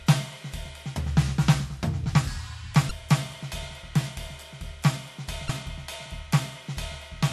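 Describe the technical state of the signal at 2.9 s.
At 2.9 s the music passes through damaged data in a compressed stream: corrupted bytes make the decoder misread frames and lose sync until it finds the next frame header. From 2.88 to 2.91 s this comes through as a brief glitch, such as a chirp, squawk, click or short hole.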